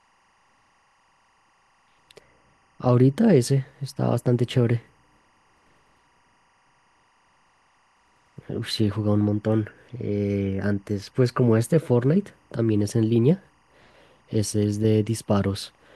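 Timecode bleed runs throughout the speech, from start to finish. Linear timecode from an adjacent track or cable has leaked into the recording. Its square wave flips between tones near 1 and 2 kHz as it encodes each bit, producing a constant chirping warble behind the speech. It sits roughly 40 dB below the programme level, and its rhythmic pattern fits code running at 24 frames per second.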